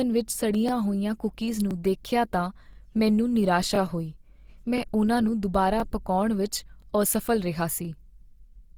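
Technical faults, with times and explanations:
Throughout: Opus compression, likely at a low rate in its music mode; full bandwidth is kept, but the speech turns plainly grainy and rough as bands are filled with noise.
0.69 s and 1.71 s: overlapping chunks; each new one-second chunk begins about 23 ms early, replaying that sliver as a stutter, before "ਹੋਈਆਂ ਕੂਕੀਜ਼" and before "ਦੇਖਿਆ ਤਾਂ ਮੈਨੂੰ".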